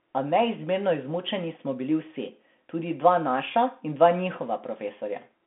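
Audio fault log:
throughout, Bluetooth CVSD headset codec: the speech sounds narrowband, as though it were squeezed through a headset link. Nothing is heard above about 3.8 kHz, and the band runs roughly 200 Hz to 3.4 kHz. A one-bit delta coder fits a 64 kbps stream. It tracks the waveform in adaptive up-or-down steps, so s sounds come out scratchy and a grainy hiss sits under the speech. That granular, slope-limited roughness is what sets it apart from a plain telephone band-limit.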